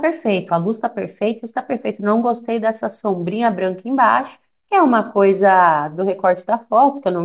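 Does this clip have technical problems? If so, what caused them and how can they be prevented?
No, the recording has no technical problems. It went through a call link, and the speech carries nothing above 4 kHz, which fits a narrowband G.711 mu-law codec at 64 kbps.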